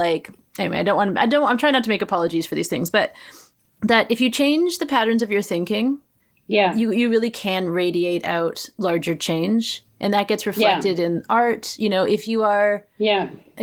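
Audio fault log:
No faults logged; the speech carries only the light texture of Opus voice compression with full bandwidth retained, consistent with hybrid coding at around 20 kb/s.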